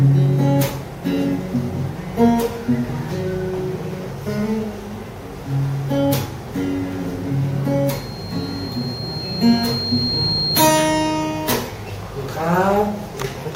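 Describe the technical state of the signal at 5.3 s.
The signal is intact at 5.3 s, with no dropout, distortion, glitch or other audible fault at that point.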